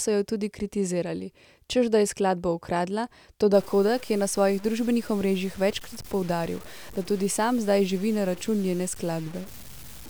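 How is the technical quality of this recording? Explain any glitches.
Quality drops partway through. Low bit depth without dither, from 3.54 s to the end: the audio was likely truncated to about 6 bits without dither, so grainy distortion around 20 dB below the speech follows it and roughens quiet passages.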